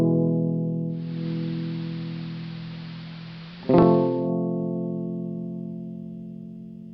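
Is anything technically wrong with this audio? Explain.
Yes. From 0.87 s to 4.32 s the music turns dull and hissy: the treble drops away, a steady hiss sits roughly 25 dB below the music, and the level shifts by about 2 dB. The change fades in and out over about 0.43 s each way. This is digital radio blending to analogue. The receiver lost its digital stream and cross-faded to the same station's AM broadcast, whose narrow bandwidth and noise floor replace the clean digital sound until the digital signal returns.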